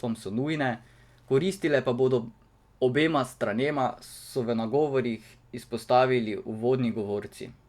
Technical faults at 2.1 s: none

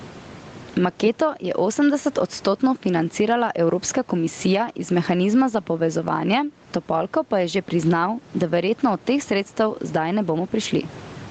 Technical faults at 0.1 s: gain pumping

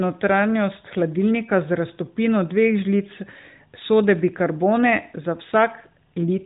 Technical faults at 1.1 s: none

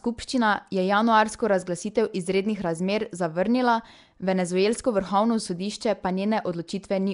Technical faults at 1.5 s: Nellymoser compression

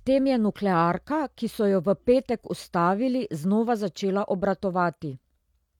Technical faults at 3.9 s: none

